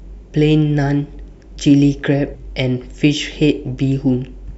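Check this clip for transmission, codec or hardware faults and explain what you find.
One codec fault stands out: compressed frames skipped at 2.34 s. The decoder never played a run of whole frames, either missing or rejected as damaged, so the speech jumps ahead by roughly 150 ms, which fits about five 26.1 ms frames.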